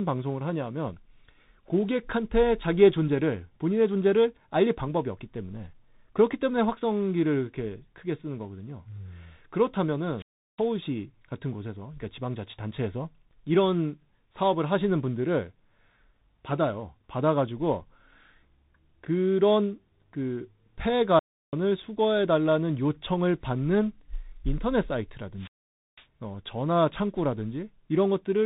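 The speech passes through tandem speech coding for its whole length: a chain of CVSD, then G.711 mu-law, then CVSD again, each at 64 kbit/s. Every stage decodes and re-encodes the previous stage's output, so the CVSD slope-tracking errors are applied twice and build on each other. Nothing survives above 3.8 kHz, which leaves the voice muffled, and the stacked coding adds a rough grain.

Three wireless microphone squelch dropouts follow, at 10.17 to 10.62 s, 21.15 to 21.56 s, and 25.35 to 26.07 s. Each time, the FM radio link weakens until the receiver's squelch shuts the output off. A short rise of hiss comes first, then a near-silent gap of about 0.36 s, 0.34 s and 0.50 s respectively, the last being the longest. The speech then returns.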